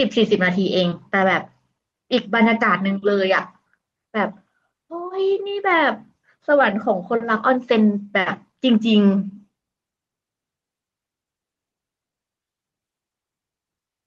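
No technical faults are audible.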